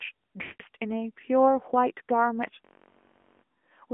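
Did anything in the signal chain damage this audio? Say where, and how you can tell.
Yes. At the codec stage, the AMR narrowband mobile codec runs throughout: the sound is confined to 250 Hz to 3.4 kHz with a buzzy, synthetic texture. That texture, not just dullness, separates it from a simple low-pass filter. It fits a rate of about 10.2 kbps.

Lost AMR speech frames on the network leg occur from 0.42 to 0.63 s. About 180 ms of sound is stretched out and fades rather than cutting to silence, which fits roughly nine 20 ms frames being concealed.

A system hang loop at the driver or buffer stage runs from 2.65 to 3.44 s. A 21.33 ms slice repeats exactly, about 37 times, as a 46.9 Hz buzz that fits a 512-sample buffer. It never fades, unlike codec concealment.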